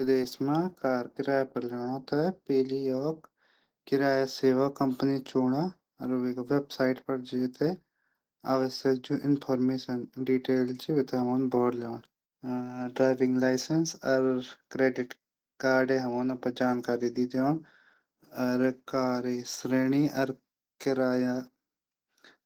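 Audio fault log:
Throughout: Opus compression. The speech sounds hoarse and muffled, with a grainy, rough edge. The high end is present but sounds thin and noisy rather than crisp. This is plainly audible across the whole clip. The likely cause is a low-rate Opus encode in its hybrid mode. In that mode the lower band is modelled by the speech coder and the upper band is filled in coarsely. The damage points to roughly 16 kbps.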